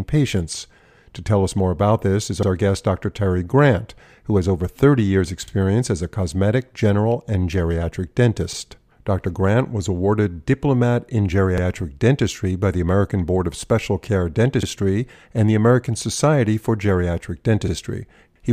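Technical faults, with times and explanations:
2.43–2.48, 5.48–5.53, 8.53–8.58, 11.58–11.63, 14.63–14.68 and 17.68–17.73 s: overlapping chunks. The speech was handled in 3-second blocks that each start 50 ms before the previous one ends, so that 50 ms plays twice, heard as a brief stutter. Unlike a dropout, no sound goes missing. Instead a small piece repeats, and the joins recur at an even 3-second spacing.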